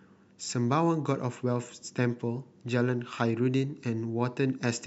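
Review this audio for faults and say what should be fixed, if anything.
Nothing in this speech recording needs fixing. No fault can be heard at any point, so no corrective work or prevention step is called for.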